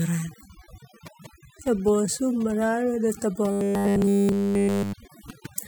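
Across the whole speech clip there is overdone noise removal. The noise reducer was set so hard that frequency bands near its noise estimate are pushed almost to silence, taking the softer parts of the voice with them. What remains has sparse twinkling specks in a nearly dead background. Unlike codec artefacts, these faults track the noise floor rather than the bitrate.

From 3.52 to 4.93 s, right after "neta ba", comes robotic sound from repeated short buffers. The voice collapses into a rigid metallic buzz at 100 Hz, likely because new audio arrived too seldom and the last 10 ms chunk was repeated in place of essentially all the real audio. The fixed pitch, rather than gaps of silence, separates it from plain dropouts.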